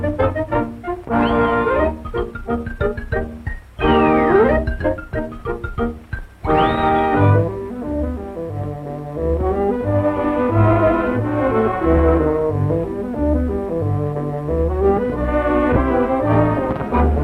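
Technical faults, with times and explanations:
No technical faults found anywhere in the clip.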